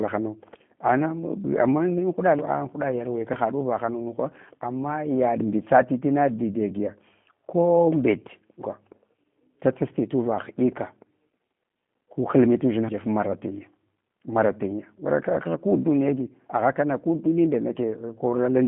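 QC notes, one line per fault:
Throughout: G.729 codec. Speech is rebuilt from a filter model and sparse pulses. It sounds plainly rough and synthetic. Nothing passes above 3.8 kHz, fitting 8 kbit/s.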